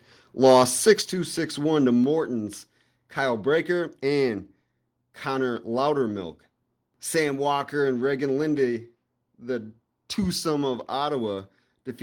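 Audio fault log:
0.45–0.91 s, microphone overload: the loudest stretch of speech takes on a crackling, gritty edge. The likely cause is an input level about 3 dB beyond what the converter could hold, so the tops of the peaks were sliced flat, with around two percent of samples affected. Unlike codec distortion, the grit follows the loudness of the speech, appearing only on the strongest moments and leaving quieter parts clean.
1.02 s, microphone volume stepped down: right after the distorted stretch, the whole signal drops by about 6 dB in one instant step and stays at the lower level. The likely cause is call software reacting to the overload and cutting the device's input volume. What separates this from a noise gate or a speaker moving away is that the background falls by the same amount as the speech, all at once, with no gradual fade.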